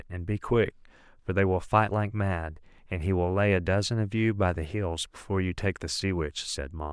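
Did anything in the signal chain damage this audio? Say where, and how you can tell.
No, nothing damaged this audio.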